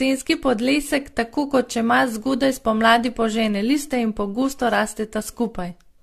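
All the way through, the speech has a swirly, hollow, smeared quality and blurred consonant attacks, with nothing above 14 kHz. That's generation loss, likely from about five rounds of AAC encoding at something like 64 kbit/s, each pass stacking fresh quantisation damage.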